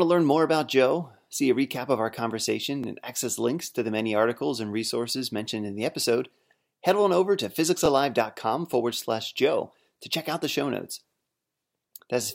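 Overlapping chunks at 2.84 s, after "recap of our conversation", and 7.86 s, after "head on over to": in this speech clip, each 5 s chunk starts 20 ms early, replaying that slice as a stutter.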